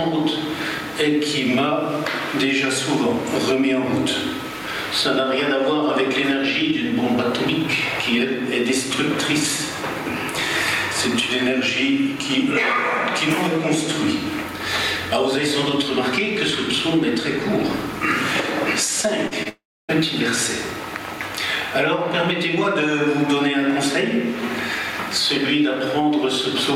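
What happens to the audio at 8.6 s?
Gain pumping is audible at 8.6 s, as it is throughout the clip. The input gain is likely set far too high, so a fast limiter or compressor clamps down on each loud sound and then lets go. The gain swings by something like 15 dB. Loud and soft passages sit squashed close together in level.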